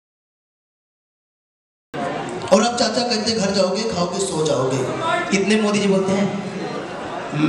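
Digital silence runs until 1.94 s, where the sound bursts in mid-event with no attack or fade: a cut-off start, as capture began late.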